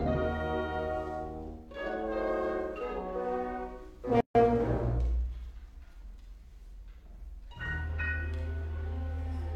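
At 4.21 s the music drops out for about 146 ms, until 4.35 s: a gap at a join of encoded pieces. Two separately encoded segments were spliced without trimming encoder delay and end padding, leaving silence with smeared edges before the music resumes where it stopped.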